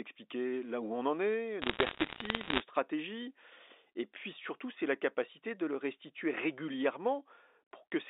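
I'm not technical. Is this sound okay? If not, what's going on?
No. From 1.62 to 2.62 s, just after "où on en est", there are bit errors on a digital phone line. Some of the data bits were flipped on the way. Each flipped bit spoils one tiny slice of sound, so you hear sharp ticks and crackle on top of the speech. The narrow, phone-like sound comes from normal telephone coding.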